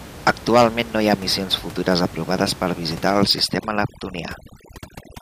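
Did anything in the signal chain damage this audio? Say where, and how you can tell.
Yes. From 3.22 s to the end at 5.22 s, just after "futures aprovades per visitar", the call processing stage applies overdone noise removal. The room noise, about 17 dB below the speech, gets pushed toward silence, leaving twinkling specks. The suppressor mutes any band sitting near its noise estimate, taking quieter speech detail with it. A spectrogram would show near-black gaps scattered with isolated bright dots and ragged, patchy harmonics.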